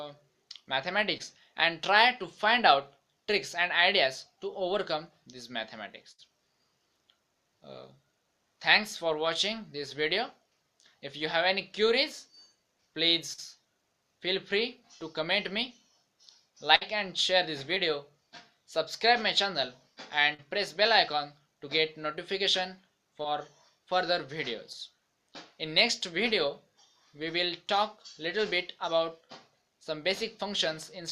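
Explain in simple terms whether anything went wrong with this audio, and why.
Two kinds of network fault affect this audio, both caused by pieces of the stream failing to reach the receiver in time.

Short concealed packet loss occurs five times: at about 1.17 to 1.21 s, 13.33 to 13.40 s, 17.75 to 17.78 s, 20.34 to 20.40 s and 23.22 to 23.26 s. Each time, 20 to 40 ms of audio went missing. The receiver covered each hole by stretching out the sound just before it and then blending back in, so each one is heard as a brief smear or wobble rather than silence.

A burst of packet loss occurs twice: at 6.11 to 6.29 s and at 16.76 to 16.83 s. Both times, about 60 ms in a row was lost. That is too long to hide neatly, so the receiver kept repeating the last sound while fading it down, which gives a short held buzz or hiss. Playback then picks up further along, and the audio that fell in the gap is simply gone. 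At 6.11 s, a further sliver of about 10 ms was also dropped.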